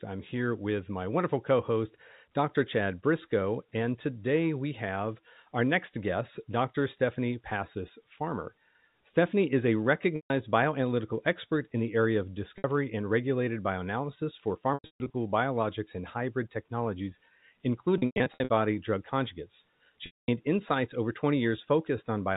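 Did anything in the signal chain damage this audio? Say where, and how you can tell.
Yes, on the network side: packet loss with pitch repetition, five times. At 10.16 s, after "is a", about 140 ms goes missing; 12.58 s loses 60 ms; 14.74 to 15.14 s, after "and regulated bioanalysis for", scatters 300 ms of gaps; 17.98 to 18.50 s does the same; and 20.06 s, after "drug conjugates", drops 220 ms. The receiver loops the last pitch cycle, so short gaps buzz and hold, longer ones fade out. The gap sizes point to 20 ms packets, all carried over G.711 A-law telephone coding.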